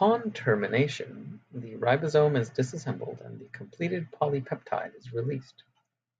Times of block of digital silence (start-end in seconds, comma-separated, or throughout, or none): none